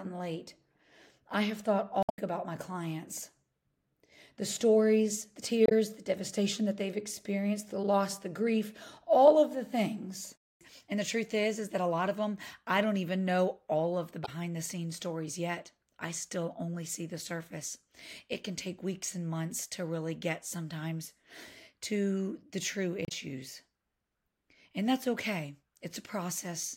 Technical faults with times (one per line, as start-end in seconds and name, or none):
2.00-2.18 damaged data in a compressed stream
5.64-5.72 damaged data in a compressed stream
14.24-14.29 damaged data in a compressed stream
23.05-23.12 damaged data in a compressed stream